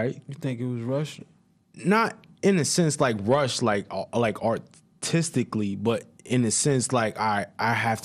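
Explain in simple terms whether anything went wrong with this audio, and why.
Something did go wrong: the speech sounds dull and muffled from start to finish, with a gurgling, grainy roughness clinging to it. That points to MP2 compression as the likely cause. This older format divides the sound into 32 slices by pitch and shares out a limited budget of data among them. Here the budget was tight, so the higher slices keep dropping out or flickering, and the remaining ones are stored too roughly, which produces that watery grit.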